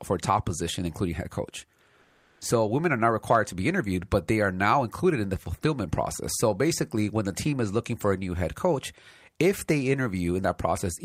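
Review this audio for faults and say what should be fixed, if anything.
From 2.01 to 2.41 s, about 400 ms, there's comfort noise in place of the background: the real room tone drops out and a flat, featureless hiss sits there instead, about 2 dB quieter. It's likely the sender's discontinuous transmission (Opus DTX) muting a pause, with the receiver filling the gap. To prevent it, turn DTX off on the sending end so the genuine background keeps flowing.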